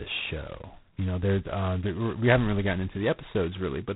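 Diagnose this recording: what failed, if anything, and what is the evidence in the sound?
The codec stage is the culprit here: G.726 ADPCM running hard, with a harsh, rasping hiss riding on the speech all the way through and rising and falling with its level. Nothing gets past 3.9 kHz, and the coarseness fits the 16 kbit/s mode, where only two bits a sample track the prediction error.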